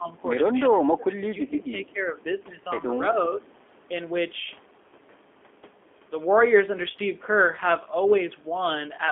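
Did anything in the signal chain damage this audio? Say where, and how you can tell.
Yes. The codec stage is the big one: the whole clip has a rough, slightly synthetic edge, and the band is squeezed to roughly 250 Hz–3.5 kHz. That points to the G.729 codec at about 8 kbit/s, rebuilding speech from a filter model plus a few pulses.

Right at the start, 0.0–0.08 s, the level dips by about 10 dB for a brief moment. That's call processing, likely speech suppressed in double talk, where the echo canceller saw both sides active and clamped down on the near talker.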